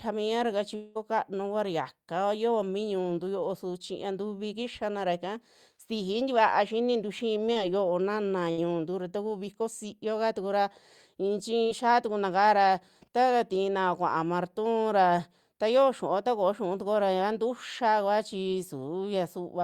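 This is a speech clip. From 0.75 to 0.97 s the sound turns into a smeared continuation of what came just before, fading rather than stopping dead, and then picks up again later with about 200 ms missing, likely a long network dropout during which the receiver filled nearly the whole gap by extending the last audio. At 7.53 to 7.57 s there is a brief wobble or smear lasting about 20 ms, the mark of short concealed packet loss: a small piece of the stream arrived too late for the decoder, which covered the gap by continuing the preceding sound and blending back into the real signal. From 8.51 to 8.59 s a held, dimming tail replaces about 60 ms of audio before the sound resumes further on. This is a burst of packet loss, where consecutive data never reached playback in time and the receiver stretched the last sound while turning it down.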